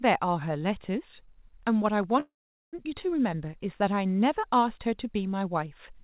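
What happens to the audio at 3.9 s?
Nothing goes wrong at 3.9 s: the speech carries on intact through the call path, with the narrowband sound of a G.711 A-law connection that has nothing above 4 kHz.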